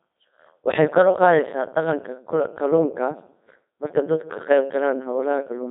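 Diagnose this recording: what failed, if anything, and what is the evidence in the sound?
The codec stage failed: the speech is a Codec 2 vocoder rendering throughout, robotic and buzzy, with heavy damage consistent with roughly 2.4 kbit/s operation. Content sits in a 150 Hz to 3.7 kHz band with nothing above 3.8 kHz, and the voice sounds synthetic because the decoder resynthesises sine waves from pitch, voicing and envelope parameters instead of preserving the waveform.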